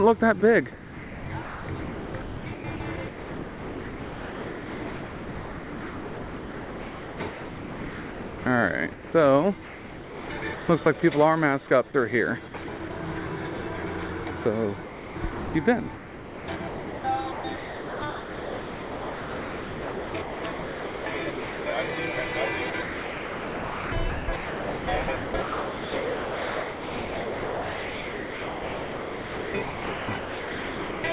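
From 0.4 to 11.02 s, sound chopped by the voice detector: the sound keeps cutting to flat comfort noise, most likely because the sender's detector toggled transmission on quiet passages. At 11.88–11.94 s, sound dropped by the voice detector: a 60 ms gap of steady comfort noise replaces the sound, likely from the detector judging it background. The same choppy switching between real sound and synthetic background recurs at 12.48–12.9 s, 14.84–21.66 s and 22.7–31.04 s. Throughout, nothing is heard above 4 kHz, which fits a G.711 A-law call path.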